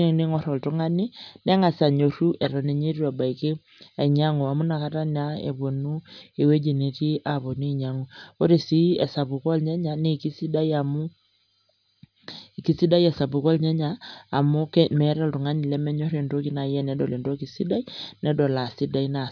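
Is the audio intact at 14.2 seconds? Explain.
Yes, at 14.2 seconds the speech carries on intact, with no audible fault.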